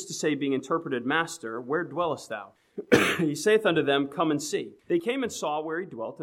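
The audio has two distinct faults. From 2.32 to 2.96 s there are CD scratch ticks: four short ticks spaced roughly a fifth of a second apart, each lasting well under a millisecond. The spacing fits a blemish on the disc surface passing the laser once per revolution and corrupting more data than error correction can rebuild, so the player briefly interpolates or mutes the damaged samples. At 5.00 s a sudden gain jump drops the level by about 7 dB, and it stays down to the end. The sound and its background noise fall together in a single sample step, with no fade. The likely cause is a digital gain change or bit shift applied without a ramp.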